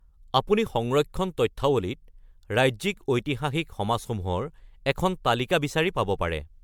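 Right through the speech there's a swirly, hollow smear, with consonant attacks blurred and a top end that stops at 19.9 kHz. That's generation loss, likely from about four rounds of MP3 encoding at rates that sound near 115 kbit/s, each pass stacking fresh artefacts.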